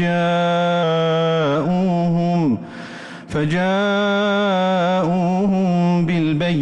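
From 0.83 s to 1.55 s the sound runs 6.4% slow and sits 115 cents flat, slightly over a semitone, before snapping back. This drift correction step is likely clock-matching software lowering the playback rate in one jump to rebalance its buffer.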